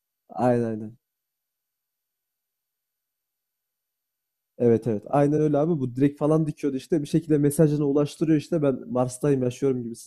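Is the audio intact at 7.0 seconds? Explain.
Yes, the audio is intact at 7.0 seconds, with no fault at that point in the speech.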